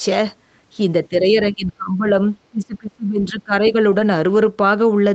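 From 1.1 to 2.12 s and again from 2.5 to 3.53 s, the speech is suppressed in double talk. It dips by about 20 dB and then about 25 dB, for roughly 0.7 s and a full second. The cause is likely an echo canceller turning everything down while both sides talked. The waveform shows the envelope collapsing in chunks, and the spectrogram shows energy thinning, highest bands first.

At 3.65 to 3.71 s, a brief scrap of the other side's voice leaks through at about 15 dB below the speech, likely echo the canceller missed. It shows as a faint, separate harmonic trace on the spectrogram.

From 3.91 to 4.01 s, 60 ms of lost packets were rebuilt from error correction, so there is no gap. These frames sound rougher and noisier. On the spectrogram they appear as smeared, grainier patches below the 8 kHz ceiling, with no hole in the waveform.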